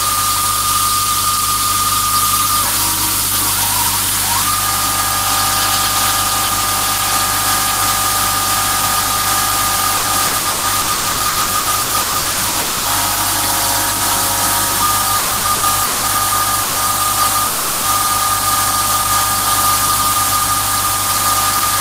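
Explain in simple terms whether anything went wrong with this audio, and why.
A low electrical tone runs under the whole recording. This is mains hum: something in the recording chain, such as a grounding problem or a nearby power transformer, picked up the 50 Hz electricity supply and mixed it into the signal. You hear it as a steady, fairly prominent drone beneath everything else, present from start to finish.

Between 9.97 and 12.58 s, and again between 15.19 and 16.06 s, the sound breaks up into repeated packet loss, which gives it a choppy, robotic quality. Small chunks of audio sent over the network went missing again and again: fifteen times in the first stretch, with the longest gap 120 ms, and four times in the second, with the longest 180 ms. Each time, the receiver filled the hole by stretching the last bit of sound. That covers roughly two-fifths of the first stretch and nearly half of the second, so pieces are simply missing.

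At 12.61 to 12.88 s and 17.47 to 17.86 s, the sound turns into a held buzz or hiss that fades for about a quarter-second and then about a third of a second. It then picks up further along, with that portion gone. This is most likely a long network dropout: nothing arrived for that whole time, so the receiver kept smearing the last sound until real audio came back.

At 16.63 to 16.78 s there is a burst of packet loss, a shorter version of the same thing. Several packets in a row failed to arrive, leaving a 120 ms hole. The receiver continued the previous sound and let it fade, so there is a brief buzzy or hissy smear. The audio then resumes with that small piece missing.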